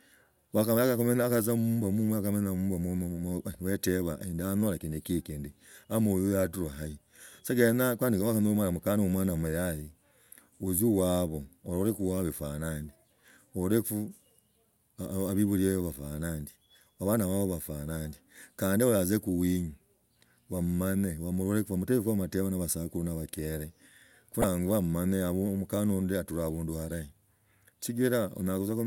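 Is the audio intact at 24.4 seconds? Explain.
No. From 24.41 to 24.44 s the speech is broken by a short blip, about 30 ms long. This is damaged data in a compressed stream: some bytes in the encoded file were lost or corrupted, so the decoder could not read the frames at that point correctly. It produced garbage or dropped them while it lost sync and hunted for the next valid frame header. Decoding then resumes cleanly after the glitch.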